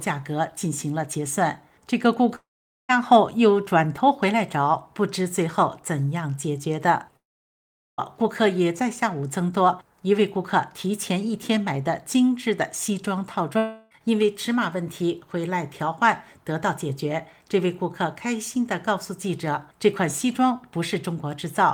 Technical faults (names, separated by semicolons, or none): long network dropout